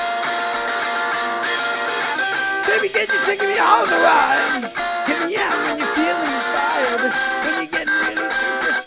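Nothing is technically wrong with this clip, as no faults can be heard anywhere in it.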